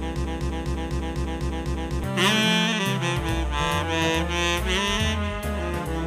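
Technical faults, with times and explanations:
0.00–2.04 s broken-record loop: an identical, undecaying 0.25 s fragment, already repeating at the start, plays seven times, likely from a stalled stream resending its buffer.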